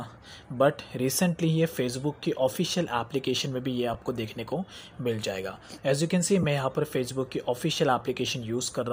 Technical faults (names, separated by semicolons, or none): lost LE Audio frames